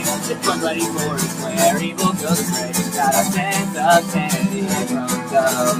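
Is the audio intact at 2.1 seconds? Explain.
No. At 2.1 seconds, as across the whole clip, sustained parts of the sound sink and swell by about 5 dB, giving a pumping, thinned quality. A noise suppressor applied to music or sounds is mistaking held tones and ambience for noise and turning them down.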